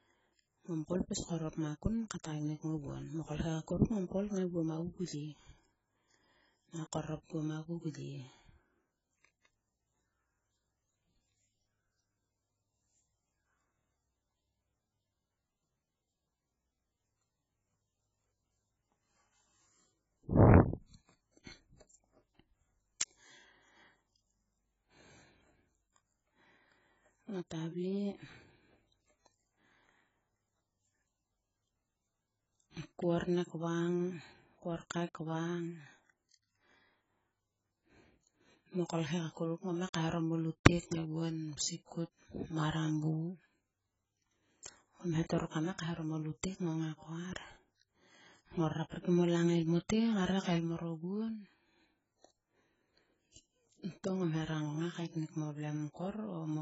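From start to finish the speech carries heavy AAC compression damage, likely from AAC-LC running at a very low bitrate, which fits roughly 12 kbps. Starved of bits, the encoder discards everything above 7.7 kHz, so sibilants sound dull and fizzy and sustained vowels warble. On a spectrogram there is a hard, flat ceiling at 7.7 kHz, with patchy holes and blotchy noise-filled bands beneath it that flicker frame to frame.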